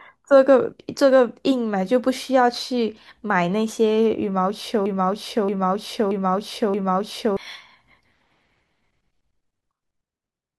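From 4.86 s to 7.37 s the speech falls into a broken-record loop: a 0.63 s fragment repeats four times back to back. The playback or stream likely stalled and resent its last buffer, so the audio due in that stretch is lost.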